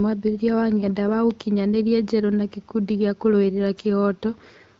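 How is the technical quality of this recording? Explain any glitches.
The technical quality holds up, and there are no glitches to explain.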